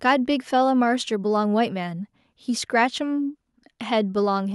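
No technical faults occur at any point in the recording, so there are none to describe in time order.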